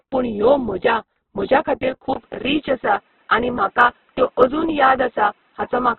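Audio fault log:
throughout Opus compression: the speech is narrowband, grainy and rough, with noisy tones but few spectral holes or swirl. This fits the likely cause: Opus in its CELT music mode at a very low rate, around 8 kbps, filling starved bands with noise and folded content.
2.14 s to end input switched to a poorer device: just after "म्हज्या खातीर" there is a gap of about 20 ms, then the sound turns duller and boxier, with nothing above 3.8 kHz and a faint new noise floor well below the speech at roughly the same level. A likely switch to a narrower-band microphone or headset call profile.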